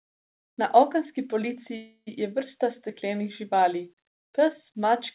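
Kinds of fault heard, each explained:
Call audio freeze: from 1.76 to 2.09 s the sound stalls into a fading buzz or hiss, then silence, then resumes where it stopped; likely a jitter buffer starved by delayed packets.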